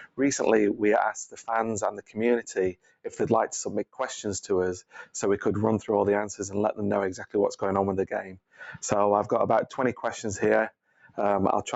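A speech-tuned noise suppressor is running on this non-speech audio throughout, treating sustained content and ambience as noise. Gain swings by around 10 dB, so held sound pumps and thins while onsets pass mostly intact. Sound cut by the noise suppressor shows as distinct dips at 0.0–0.2 s, 1.29–1.44 s, 1.91–2.19 s, 2.72–3.18 s, 4.82–5.14 s, 8.23–8.6 s and 10.7–11.18 s. There the level falls by about 15 to 18 dB, with decays clipped short. The call path's 8 kHz band limit is also audible.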